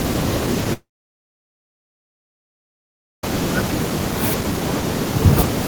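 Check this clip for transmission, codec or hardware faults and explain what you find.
There's one clear fault in this speech clip, a long network dropout. From 0.73 to 3.24 s the sound breaks off, carries on briefly as a fading buzz, then sits near silent for about 2.4 s. That's likely a stall in arriving packets: the receiver patched the gap, ran out, and resumed later with roughly 2.5 s of audio simply gone.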